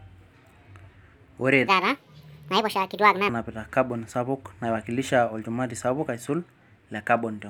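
From 1.68 to 3.29 s, a section at the wrong speed plays 1.55 times too fast. Pitch rises about seven semitones with it, so the speech turns high and hurried. It snaps back before "kabon sapuk naiwakilisha", likely from a clock mismatch.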